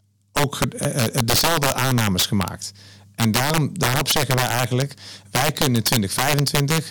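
Integer overflow runs throughout: the signal was pushed about 9 dB too hot, so samples wrapped to the opposite sign instead of limiting, producing sharp, violent cracks on loud peaks.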